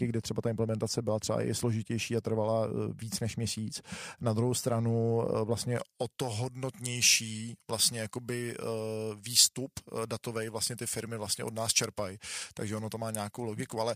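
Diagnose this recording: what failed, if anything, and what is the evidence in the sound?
Pre-emphasis left on, from 5.77 s to the end at 13.96 s. The speech turns thin, bright and sibilant, with treble about 11 dB hot at 10 kHz relative to 1 kHz, a tilt that fits a J.17 curve. The matching de-emphasis was skipped at the receiving end of the transmission path.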